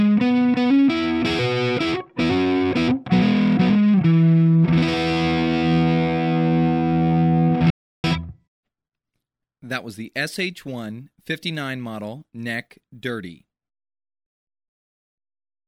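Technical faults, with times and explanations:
7.70–8.04 s, audio dropout to silence: the sound cuts off mid-flow and resumes 0.34 s later with no room tone between, likely because the input was briefly lost while zeros kept being written. The waveform goes flat, and the spectrogram shows a blank vertical band.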